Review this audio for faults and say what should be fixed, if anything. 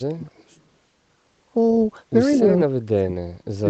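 Speech suppressed in double talk, from 0.00 to 0.47 s and again from 2.36 s to the end: the speech sinks sharply, by about 35 dB in the first stretch and about 40 dB at its deepest in the second. The likely cause is an echo canceller that heard both sides at once, could not tell the near talker from the loudspeaker echo, and attenuated everything together. Better double-talk detection, or a canceller that suppresses less aggressively when both sides overlap, would keep the near talker audible.

Echo leak, from 0.55 to 0.62 s: a brief, faint copy of the speech comes back about 203 ms after the original, roughly 40 dB below it, as a short scrap rather than a sustained echo. It was likely returned by a far-end loudspeaker whose echo canceller let a little residual signal through. Improving the far end's echo cancellation, or having that side use a headset, would stop the leak.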